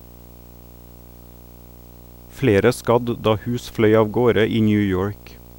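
Video or display buzz runs through the whole speech clip. A screen feed leaks in as a 59.94 Hz buzz, a 15.7 kHz whine and hash, around 25 dB below the speech.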